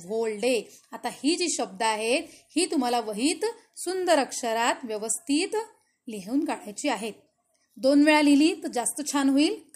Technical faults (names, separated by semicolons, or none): dropped samples